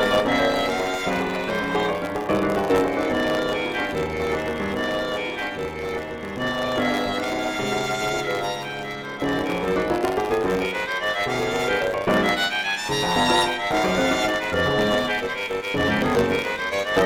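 A steady 100 Hz buzz runs from start to finish, and the audio plays about 1.07 times too fast while its pitch stays roughly normal. This is a block size mismatch (truncated): one stage writes longer blocks than the next reads, which fits 512-sample writes, so each block's tail is discarded.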